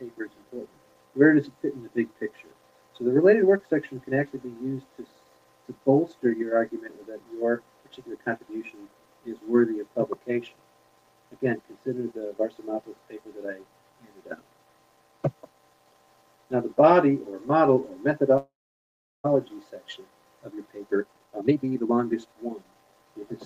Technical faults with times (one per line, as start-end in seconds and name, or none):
18.37-19.26 call audio freeze
20.42-23.09 jitter buffer speed-up